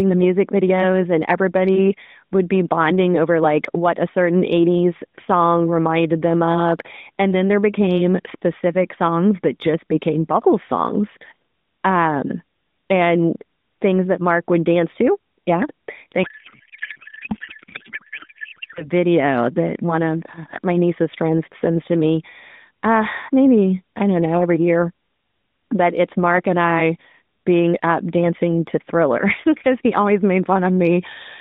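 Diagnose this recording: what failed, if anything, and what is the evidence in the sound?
Codec payload misread at the codec stage, from 16.24 to 18.86 s. For those 2.6 s the speech turns into garbled noise and warble that barely follows it, which points to octet-aligned AMR frames being unpacked as bandwidth-efficient, so every field is read from the wrong bits.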